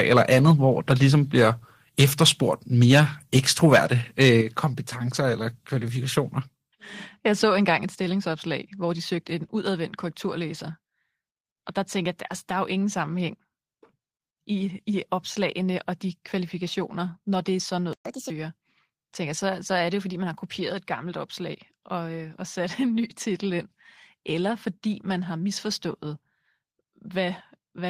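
The opening seconds have a harsh, crackly edge on the loudest syllables at 0.00–0.38, 0.90–1.06, 1.99–2.29, 2.82–3.00 and 4.21–4.37 s. That's microphone overload, likely from input gain set too high: peaks run about 3 to 6 dB past the converter's limit and a small share of samples get their tops sheared flat.

Right after that last crackle, the microphone volume is stepped down at 4.41 s, with voice and background dropping together by about 6 dB. It happens again at 7.77 s, by about 4 dB. That's likely the call software reacting to the clipping by cutting the device's input level in single jumps.

At 17.93 s the audio just stops for about 123 ms, until 18.06 s. That's a playback stall, likely the player starving for data or getting its thread blocked before resuming.

Straight after, from 18.06 to 18.30 s, there's catch-up at higher speed. The player burns through its backlog at 1.5 times normal speed, so everything goes briefly chipmunky, up around seven semitones.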